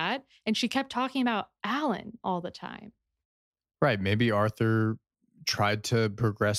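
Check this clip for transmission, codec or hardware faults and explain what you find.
No faults detected.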